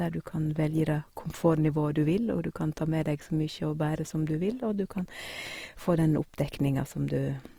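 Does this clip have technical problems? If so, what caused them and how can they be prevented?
Yes. Throughout the speech, tones sound grainy and rough, with a noisy texture in place of clean detail, even though the band still extends to about 20.4 kHz. The likely cause is Opus compression in its music mode: when bits run short, the encoder fills bands with folded or noise content, which fits a rate near 24 kbps. Encoding at a higher bitrate, or working from an uncompressed master, would prevent it.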